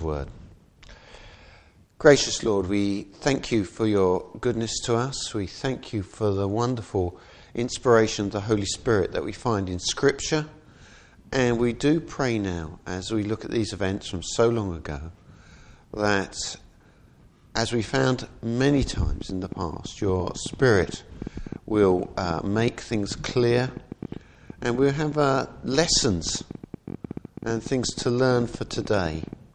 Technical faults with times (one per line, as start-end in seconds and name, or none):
18.77-29.34 train of clicks